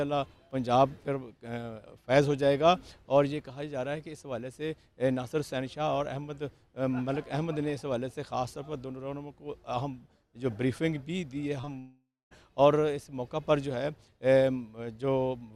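Two short concealed packet losses land back to back at 11.61 and 11.65 s. About 20 ms goes missing each time and gets papered over, leaving a quick smeary wobble. Then from 11.79 to 12.33 s the sound stretches into a fading buzz and goes silent for about a quarter second before resuming with a chunk gone, likely a long network dropout.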